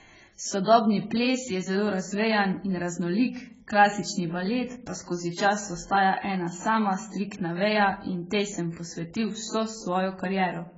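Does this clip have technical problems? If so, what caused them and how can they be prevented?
Yes, throughout: heavy AAC compression, likely from a very low bitrate around 12 kbps, removes everything above 7.6 kHz and leaves warbling, smeared sibilants. A plain low-pass filter would not swirl like this. Encode at a higher bitrate to prevent it.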